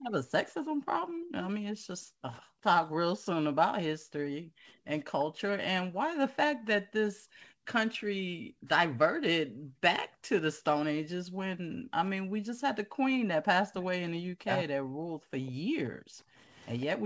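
Speech in a call, with three echo-canceller faults. Speech suppressed in double talk turns the talker's voice down in brief stretches, dropping very deeply, around 40 dB, at 0.03–0.79 s, repeatedly between 4.07 and 14.71 s (roughly 1.5 s in all), and at 16.89–16.94 s. The likely cause is the canceller mistaking the talker for loudspeaker echo while the far side spoke. Unlike gating, it removes the voice itself, not the room. Background gated by the echo canceller pulls the room sound down by about 40 dB, intermittently from 1.07 to 10.65 s (around 3 s total), at 12.57–13.28 s, and from 14.99 s to the end. The background vanishes and returns. An echo leak at 15.46–16.85 s adds a faint delayed copy of the voice, 148 ms late and roughly 25 dB below it, likely from a loudspeaker's residual echo being sent back. It is an added repeat, not a dropout.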